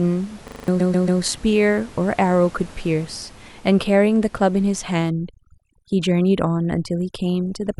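Speech, with three separate faults. At 0.48 s the sound locks into a system hang loop until 0.68 s. A 40 ms slice repeats five times, giving a steady buzz at 25 Hz. The driver froze while the hardware kept cycling its ring buffer, which fits a 40 ms buffer, and about a fifth of a second of speech is lost. Right after, from 0.79 to 1.21 s, repeated frames cause a stutter. A block of about 139 ms plays three extra times. Compressed frames were sent more than once, which fits a run of six frames, and 418 ms is added to the clip. From 5.10 s to the end, overdone noise removal takes hold. The room noise sits about 25 dB below the speech, and a too-strong reducer cuts bands near that noise level. The background drops and breaks up into twinkling specks, and quiet parts of the voice are cut away with it.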